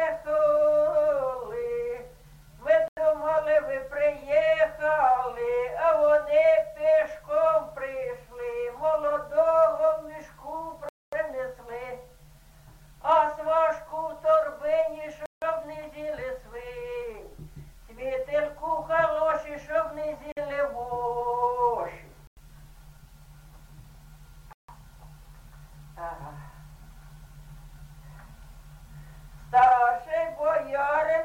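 The sound drops out to silence six times: at 2.88 s for 89 ms, 10.89 s for 237 ms, 15.26 s for 162 ms, 20.32 s for 49 ms, 22.27 s for 97 ms, and 24.53 s for 156 ms. Each gap is abrupt, and the audio then carries on. The pattern points to a likely Bluetooth stall. Radio interference delayed packets, so the headphones' buffer emptied. Playback halted until the resent data arrived.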